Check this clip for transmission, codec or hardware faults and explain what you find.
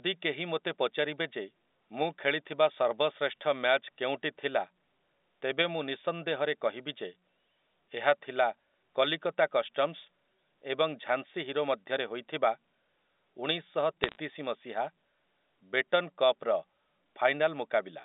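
One fault is audible, a short burst of bit errors on a digital phone line riding over A-law telephone audio, whose narrow band of roughly 250 Hz to 3.7 kHz fits 64 kbit/s G.711.

Bit errors on a digital phone line occur from 14.04 to 14.17 s. A few bits in every thousand flip in transit, and each flip corrupts one logarithmic sample. Where a sign or high-order bit is hit, the sample jumps, producing sharp ticks and brief crackle over the speech.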